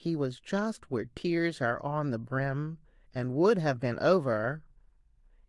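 No technical faults can be heard anywhere in this speech clip. There is no moment that needs a timestamp or an explanation.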